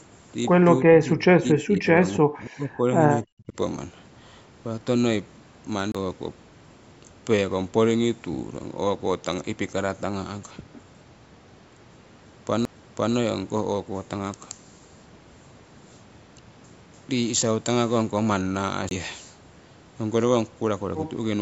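It's a speech recording where the talker drops out heavily from 0.79 to 2.86 s and again from 3.24 to 3.54 s, sinking by something like 40 dB in pieces. That's likely speech suppressed in double talk, with the echo canceller ducking the talker while the far end spoke. Then there are three CD skips, at 5.92 to 5.95 s, 12.65 s and 18.89 to 18.91 s. Each is a brief mute of a few to about 30 ms, followed by the audio jumping to a different point as the laser hops tracks. The call microphone processing is doing its usual job, with nothing above 8 kHz.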